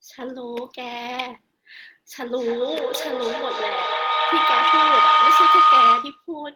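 From 2.18 s to 6.34 s the speech is overtaken by feedback howl. A microphone is picking up a loudspeaker carrying the same call, and each pass around that loop returns more level than it started with, so the repeats build rather than decay. The sound narrows to a tone around 1.5 kHz that pulses roughly every third of a second and peaks about 13 dB above the speech.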